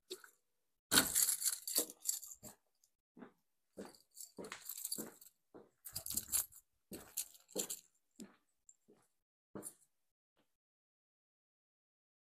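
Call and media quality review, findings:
Block size mismatch (padded), 9.70–10.93 s: buzz at 43.1 Hz over the sound. Probable component is a buffering stage reading 1024-sample blocks from a writer with slightly shorter ones, zero-filled. Timing drift negligible (0.999x). Waveform shows periodic flat gaps, and the spectrogram shows evenly spaced vertical stripes.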